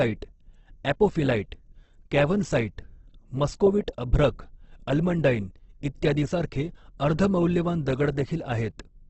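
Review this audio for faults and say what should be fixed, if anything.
The speech was likely squeezed through Opus compression at a very low bitrate, with the grainy character pointing to its music (CELT) mode at around 12 kbps in a wideband setting. Starved of bits, the encoder keeps each band's energy but fills the detail with folded or noise-like content, so throughout the clip the speech sounds rough and grainy. Nothing is heard above 8.2 kHz, which takes away air and crispness. Encoding at a higher bitrate, or keeping an uncompressed master, would prevent this.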